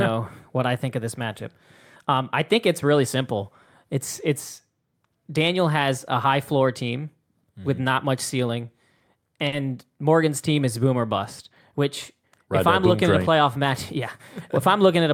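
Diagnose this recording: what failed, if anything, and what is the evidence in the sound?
At 9.47 to 9.54 s a sound is held about 50 ms too long with a slight buzz or dip. This is a short stall from a late packet: the network jitter buffer ran dry and stretched audio until delivery resumed.

Right after "looking train at a", from 13.31 to 13.97 s, the speech runs hurried at 105% speed with unchanged pitch. This is a jitter buffer speed-up, dropping pitch-period slices totalling a few tens of milliseconds to cut accumulated delay.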